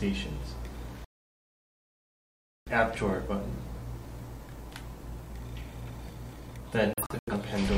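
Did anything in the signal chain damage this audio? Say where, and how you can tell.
Yes. A digital broadcast dropout occurred at the receiver. The sound mutes from 1.05 to 2.71 s, losing about 1.6 s. From 6.93 to 7.33 s it breaks into several short holes, the longest about 85 ms. The receiver muted corrupted frames, so that programme is lost.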